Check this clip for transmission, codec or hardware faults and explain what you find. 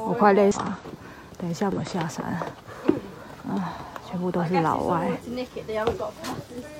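Three short faults are present, all of one kind: damaged data in a compressed stream. They occur at 0.51 to 0.58 s, 1.72 to 1.78 s and 6.13 to 6.19 s. Corrupted bytes make the decoder misread frames and lose sync, so each event sounds like a brief chirp or blip of about 60 ms.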